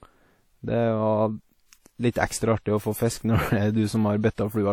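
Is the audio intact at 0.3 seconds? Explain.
No. At 0.3 seconds, as everywhere in this speech clip, the sound is washy and ringing, with a hiss that swells and fades with the signal and nothing above 18.9 kHz. This points to WMA compression at a low bitrate, likely around 48 kbps, where long transform blocks smear quantisation noise and zero weak components.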